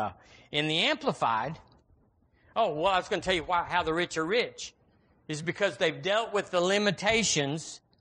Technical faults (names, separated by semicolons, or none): low-delay AAC compression; AAC frame loss with concealment